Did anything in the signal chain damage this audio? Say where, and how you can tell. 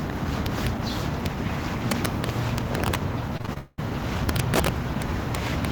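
Yes. There is integer overflow at the sample-format conversion or gain stage. Violent cracks appear at 0.46–0.67 s, as a single snap at 1.26 s, across 1.91–2.95 s, and from 4.29 s to the end. Loud peaks there exceed full scale by about 1, 0, 6 and 9 dB. Instead of being held flat at the ceiling, each peak wraps to the opposite extreme, a full-range jump. That makes it far harsher than clipping, which only flattens and buzzes.

Repeated packet loss, producing robotic sound, occurs on the network or jitter-buffer side between 3.37 and 3.80 s. Five separate gaps cut into that stretch, the longest 198 ms. About 280 ms went missing and roughly 280 ms was patched by extending the preceding sound, so around two thirds of the span is concealment. That gives a choppy stutter. Unlike the overflow cracks, nothing spikes: the audio simply freezes and loops where material is absent.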